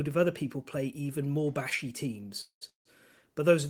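After "play even more bashy", call audio freezes at 2.41–2.63 s and 2.69–2.87 s: the last sound smears briefly, then drops to silence, likely from late packets emptying the jitter buffer. Speech resumes where it stopped, about 0.2 s and then 0.16 s late.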